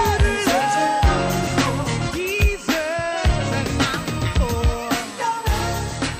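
A steady, fixed-pitch USB whine runs throughout, with its fundamental at 8 kHz and its strongest component at 16 kHz, roughly 15 dB below the sound. This is interference from the USB bus's 125-microsecond microframes leaking through power or ground, and its pitch sets it apart from low mains hum.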